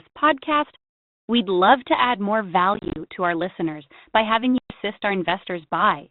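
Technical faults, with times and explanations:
2.74–2.98 s, packet loss on an ADPCM call: after "love to add more", about 130 ms drops out in short gaps spread over 220 ms (longest 30 ms) before "to our listeners by". The waveform shows flat silent slots with vertical edges, and the spectrogram shows blank columns. Each resumption sounds slightly distorted because the 32 kbit/s G.726 decoder's predictor and step size have drifted from the sender's. That suggests around fifteen small packets went missing.
4.58–4.72 s, packet loss on an ADPCM call: just after "our listeners by having", about 120 ms goes silent with hard edges, visible as a squared-off gap in the waveform and an empty band in the spectrogram. Speech returns slightly distorted until the decoder's adaptive state realigns within tens of milliseconds. That points to roughly ten lost packets.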